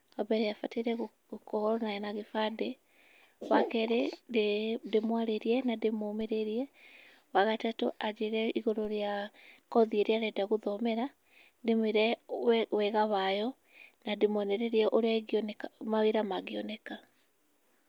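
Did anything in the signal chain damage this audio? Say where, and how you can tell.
Yes. Two low thumps land at 6.21 s and at 8.85 s, the second between "wa gatatũ anjĩre igũrũ" and "rĩa kothi ĩrĩa arenda". These are DC steps at the converter: the zero line jumps by about -42 dBFS, and a roughly 5 Hz high-pass then bleeds each offset away.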